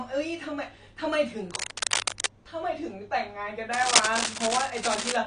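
Throughout, the speech was likely squeezed through low-bitrate AAC compression, consistent with AAC-LC at around 32 kbps. The coder discards what its hearing model rates least audible, so nothing remains above 10 kHz, and the damage is plainly audible as dull, smeared speech with a warbling, fizzy edge on sibilants.

From 1.50 to 2.26 s, and again from 3.73 to 5.17 s, a worn cable or connector was likely being moved, its contact resistance jumping erratically. This produces cable scratch noise, dense, uneven bursts of scratching and rustling roughly as loud as the speech, lying directly over it.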